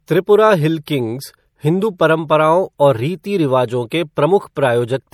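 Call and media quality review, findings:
MP3 compression throughout: watery, swirling speech, chirpy s sounds; likely weak frequency lines gated per frame, fits 64 kbps. Treble reaches 20.7 kHz, cut off above that.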